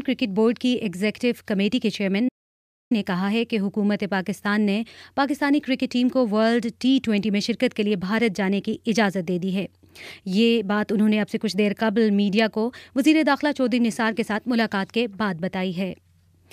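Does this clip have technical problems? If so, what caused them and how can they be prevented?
Yes. An audio dropout to silence runs from 2.29 to 2.91 s: the sound cuts off mid-flow and leaves about 0.62 s of silence with no room tone, most likely because the input was briefly lost while the recorder kept writing silence. Securing cables, connections and mute controls and monitoring input levels during capture prevents this.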